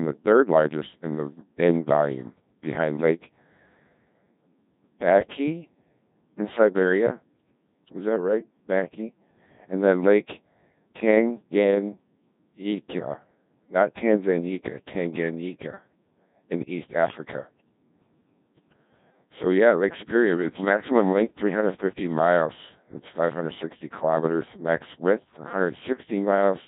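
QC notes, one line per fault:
Throughout, Codec 2 vocoder: speech comes out robotic and buzzy, with heavy damage. Only pitch, voicing, energy and a coarse spectral envelope survive, and the decoder rebuilds the voice from sine waves, so the original waveform is lost. The degree of smearing fits a rate near 1.6 kbit/s.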